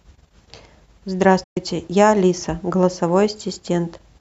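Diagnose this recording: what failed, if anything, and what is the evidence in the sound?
Digital broadcast dropout at the reception stage. At 1.43 s the speech fades out over about 8 ms and stays silent until 1.57 s. The receiver muted on missing or corrupt frames, and the 120 ms of lost programme fits about five dropped frames. That audio is gone.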